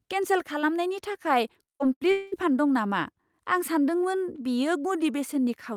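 From 1.63 to 2.03 s the speech breaks up with repeated packet loss, giving a robotic sound: four gaps, the longest 74 ms, patched by stretching the preceding audio, so about half the stretch is concealed. A spectrogram shows smeared, repeated harmonic blocks between normal frames.

Shortly after, from 2.11 to 2.34 s, comes what is likely a long network dropout. About 0.2 s is lost and filled by a fading buzz with no true silence. The waveform shows a decaying envelope, and the spectrogram shows flat, featureless energy before the speech resumes.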